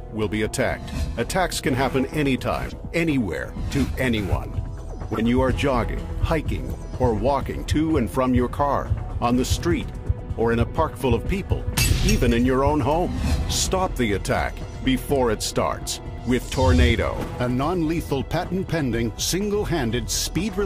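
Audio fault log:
2.69–2.74 s, 5.14–5.20 s, 16.89–16.91 s: corrupt frame decoded. Damaged compressed frames played anyway put energy at the wrong frequencies, giving blips peaking around -20 to -15 dBFS. On a spectrogram these appear as brief misplaced vertical smears; on the waveform, as short bursts.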